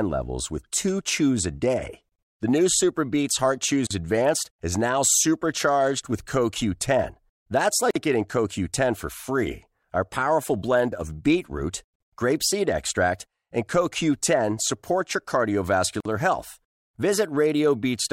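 At 3.87, 7.91, 11.96 and 16.00 s, the speech drops out briefly. These are gaps at joins of encoded pieces, 39 then 49 ms long, leftover encoder delay and padding.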